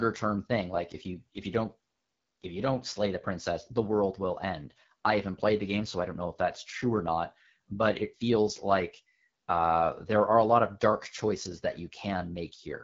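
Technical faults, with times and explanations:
Throughout, AMR wideband (HD Voice) codec: the speech sounds rough and raspy, with the plainly audible damage of this codec at one of its lowest rates, consistent with about 8.85 kbit/s. A pulse-driven vocal tract model rebuilds the sound below 6.4 kHz, and the upper edge is filled with shaped noise. On a spectrogram, harmonics blur and smear, the top band looks like diffuse noise without harmonic lines, and nothing appears above 7.5 kHz.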